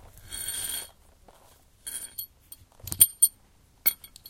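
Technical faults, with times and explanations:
No technical faults can be heard in this everyday sound recording.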